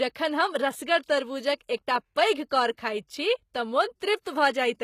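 All the way through, the treble on this speech has that rebuilt quality you get from HE-AAC compression, likely at a low bitrate around 20 kbps. The top end is synthesised from copied lower bands rather than coded, so s sounds come out gritty and a bit lispy, and nothing survives above 14.9 kHz.

Right after "कौर खाइत छी तँ", from 4.21 to 4.25 s, there's pre-echo. The codec smeared noise meant for a sharp onset back into the quiet just before it, so about 41 ms of hiss leads in and the attack lands softened.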